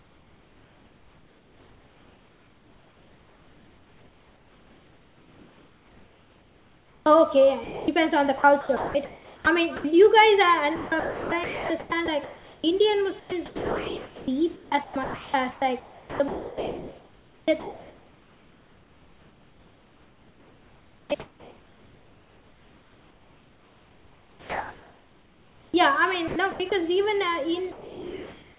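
Right from the start there's echo with no canceller: a thin copy of the speech trails each phrase by roughly a third of a second, sitting about 24 dB down.

Over 0.00–9.91 s, 10.76–12.64 s, 13.20–14.28 s, 14.54–25.74 s and 26.28–26.72 s, the sound is chopped by the voice detector. It's likely the sender's detector flicking on and off, leaving the speech choppy and swapping bits for comfort noise.

From 27.72 s to the end at 28.58 s, sound is dropped by the voice detector. The tail likely got judged as background, so the last half-second or so of speech gives way to steady comfort noise.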